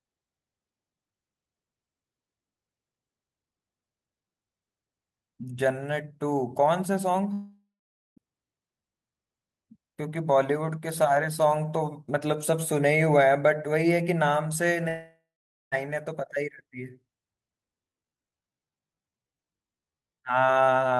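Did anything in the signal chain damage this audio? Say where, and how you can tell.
Yes. A long network dropout occurs twice, from 7.33 to 8.20 s and from 14.89 to 15.75 s, most likely at the network stage. Each time about 0.84 s of audio never arrives. The receiver's loss concealment carries the last sound forward as a fading buzz, then leaves near silence for about 0.48 s. The audio resumes later, with the missing stretch gone.

A time-stretched section runs from 17.85 s to the end. The pace drops abruptly to about 0.70 times normal speed while the pitch stays put, which likely points to a stretch applied during call or playback processing. To lengthen the audio without lowering its pitch, the software repeats short slices, and that makes this passage drag. The Opus call path itself adds its usual coding noise and a top end that stops near 12 kHz.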